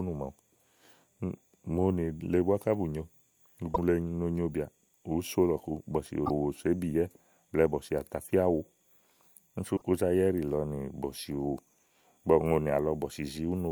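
Damaged data in the compressed stream makes the decoder misread frames and lose sync, giving brief speech glitches at 3.71–3.79 s, 6.23–6.31 s and 9.76–9.82 s.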